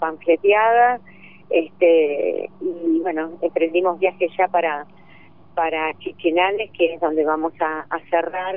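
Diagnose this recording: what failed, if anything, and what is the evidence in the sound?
Nothing in the recording points to a failure at any stage of the chain: there are no dropouts, clicks, distortion or timing irregularities to be heard.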